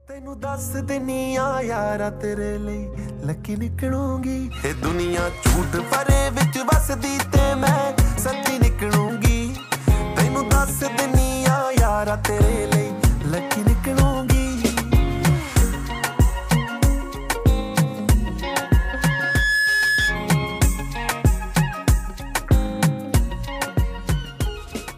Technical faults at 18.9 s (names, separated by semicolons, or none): loudspeaker feedback squeal